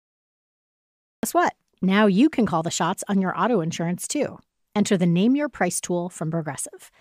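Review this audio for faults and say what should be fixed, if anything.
There's a cut-off start here: digital silence runs from 0 to 1.23 s, then the speech comes in abruptly at 1.23 s, mid-sound, with no natural attack. The capture began late and missed the start of the phrase. To prevent it, start recording or arm the stream a second or two before anyone talks.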